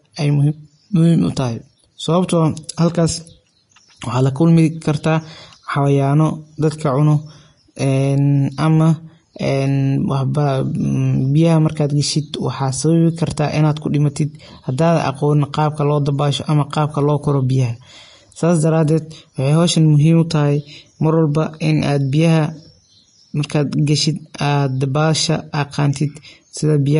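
From start to finish the speech carries a hissy, grainy texture, with roughened tones and softened consonant attacks. This is likely Vorbis compression at a low setting, consistent with a bitrate around 32 kbps. The encoder has dropped everything above 10.6 kHz and quantised the remaining treble so coarsely that its fine detail has become noise-like. A spectrogram shows a hard ceiling at 10.6 kHz and mottled, speckled energy just beneath it.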